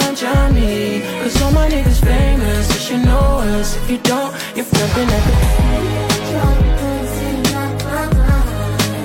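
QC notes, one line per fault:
4.69–4.74 s, stream segment skipped: the sound jumps forward abruptly with a brief blip at the join. The likely cause is a segment of the streamed programme failing to load, so playback resumed from the following segment and left a gap in the material.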